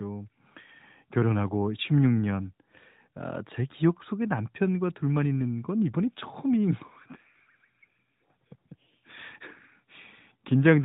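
No technical faults are audible.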